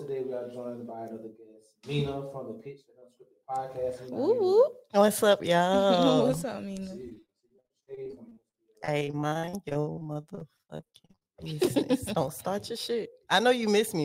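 From 7.09 to 11.25 s, repeated packet loss (robotic sound) sets in: dozens of short dropouts, the longest 55 ms, are patched by stretching the preceding sound, covering roughly 30% of the span. The result is choppy audio with fragments missing.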